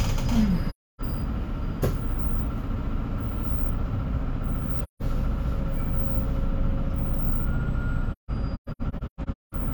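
AAC frame loss with muting at 0.69–1.02 s, 4.81–5.02 s and scattered across 8.10–9.55 s: zeroed frames make the sound fade out and back in.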